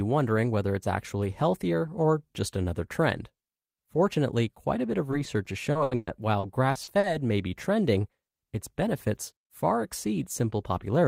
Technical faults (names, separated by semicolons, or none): repeated packet loss (robotic sound)